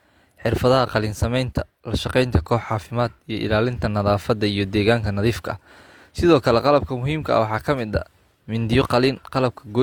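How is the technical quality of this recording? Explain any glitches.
The recording has one fault, which runs from start to finish. Transcoding between lossy codecs, throughout: the speech likely went through HE-AAC and then Opus, both sounding near 48 kbit/s. Their artefacts stack, and nothing is present above 20.2 kHz.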